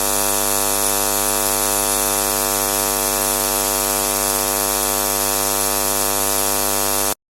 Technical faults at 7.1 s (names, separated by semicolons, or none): none